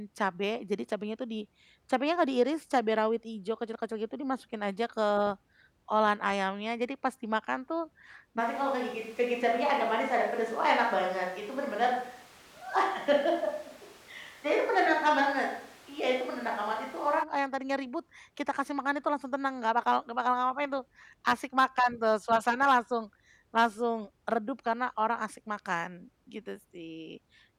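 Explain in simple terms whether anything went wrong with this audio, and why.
Right after "pas dimakan tuh", from 8.4 to 17.2 s, the speech turns suddenly roomy, hollow and thin, with more background noise but no louder or quieter. The likely cause is a switch to a distant microphone: unlike added reverb, the change flips abruptly in and out.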